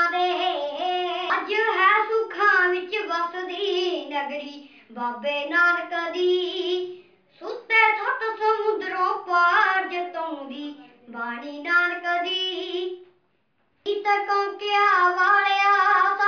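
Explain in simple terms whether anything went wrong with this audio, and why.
Nothing went wrong; no faults can be heard.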